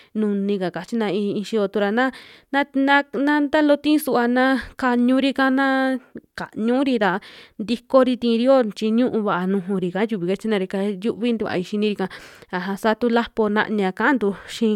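Nothing stood out on listening to this recording as a technical fault.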